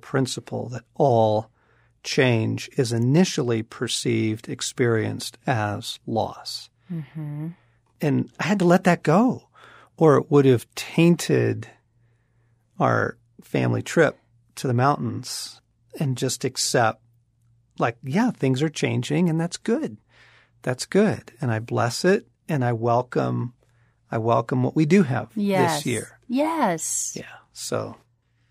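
A speech recording with no technical faults to point out. Nothing in what can be heard suggests a problem anywhere in the recording or playback chain.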